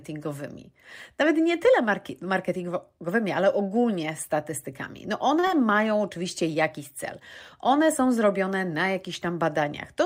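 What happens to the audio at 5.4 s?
Right around there you get a short stall from a late packet, from 5.39 to 5.45 s. A packet showed up late, the jitter buffer ran dry, and the receiver held the last sound for about 37 ms before carrying on from the same spot. Nothing's lost, but that sound hangs a touch too long and everything after lands 37 ms later.

Straight after, from 5.47 to 5.51 s, there's a short concealed packet loss. About 20 ms of audio never made it, and the decoder patched roughly 18 ms of that gap by extending the preceding sound, so you hear a quick smear or wobble where the real audio dropped out.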